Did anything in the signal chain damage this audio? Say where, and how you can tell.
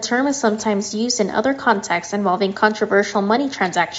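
No, the speech shows only the expected marks of a call's microphone processing, with the lowest bass trimmed by its high-pass filter, and no stage in the chain has damaged the signal.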